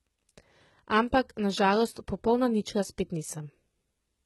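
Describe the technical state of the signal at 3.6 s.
At 3.6 s, as throughout, the speech likely carries HE-AAC compression at a low bitrate like 16 kbps: treble rebuilt by band replication, cutting off near 11.8 kHz, s sounds gritty and lispy.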